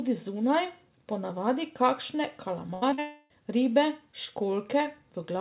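Just after "zunaj po navadi kakšne", from 2.74 to 2.84 s, the last sound is briefly held and fades. This is a burst of packet loss: about 80 ms of audio never arrived and the receiver stretched the last sound to cover it.

A brief smear follows at 2.90 s and a slightly longer wobble from 2.94 to 3.00 s. These are short concealed packet losses of about 20 ms and 40 ms, each patched by continuing the preceding sound before blending back into the real audio.

From 3.00 to 3.32 s a drawn-out, fading continuation of the last sound takes over without any true silence before the audio resumes further on. The likely cause is a long network dropout, with 300 ms of audio lost and replaced by continuation.

Throughout, the band stops at 4 kHz, which fits a 64 kbps G.711 mu-law call path.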